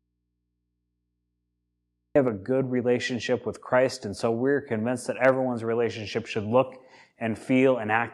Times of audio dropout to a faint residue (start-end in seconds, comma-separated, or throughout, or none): 0.00-2.15